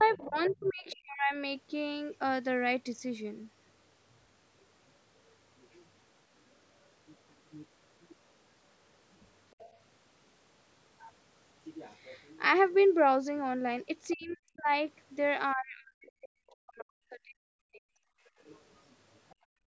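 From 0.0 to 1.36 s the speech dips sharply, by about 40 dB at its deepest, for roughly a second in all. This is speech suppressed in double talk, likely because the echo canceller could not separate the talker from the loudspeaker echo and turned both down. Overlapping it, from 0.08 to 0.96 s, a faint second voice sits about 20 dB below the speech. That is the other side's voice leaking through, likely residual loudspeaker echo the canceller missed. Similar faint scraps, about 25 dB down, return at 9.51 to 9.76 s and 14.1 to 14.37 s.

From 14.15 to 17.93 s the speech again drops in pieces, by about 40 dB at worst and for roughly three seconds in total. This is the same double-talk suppression, likely the canceller ducking the talker during overlap.

At 18.21 to 18.36 s the room sound briefly falls away, by about 19 dB. That is background gated by the echo canceller, clamping the microphone while the loudspeaker played. 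A tiny leak near 19.3 s, about 35 dB down, is followed from 19.35 s to the end by a deeper background gate of about 33 dB.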